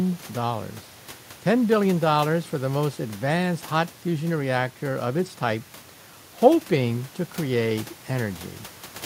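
The speech signal shows no technical faults, with only the background of the recording space audible beneath it at about 24 dB below the voice.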